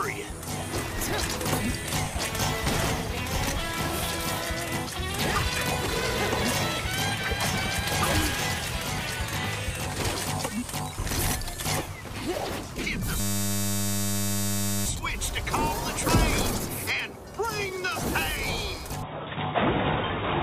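From 13.2 to 14.86 s a steady 100 Hz buzz takes over. This is a system hang loop, with the hardware replaying one 10 ms buffer while the system stalled.

At 19.03 s the sound abruptly turns dull, with nothing above 3.8 kHz and faint new background noise. The likely cause is the input switching to a poorer device.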